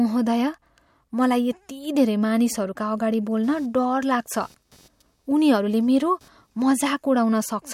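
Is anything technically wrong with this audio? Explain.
Yes. From 3.43 to 6.83 s, just after "धेरै मानिसहरूका अगाडि", computer activity noise appears: a faint buzzing chirp pulsing at around 300 Hz, roughly 35 dB below the speech. Processor or peripheral load is disturbing the shared audio ground. Unlike steady mains hum, it starts and stops with that activity.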